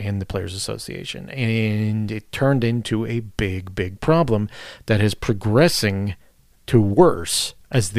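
No technical faults can be heard anywhere in the recording.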